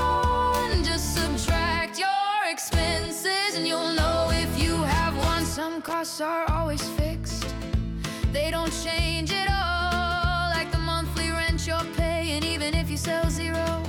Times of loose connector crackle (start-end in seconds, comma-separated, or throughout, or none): 5.88-5.93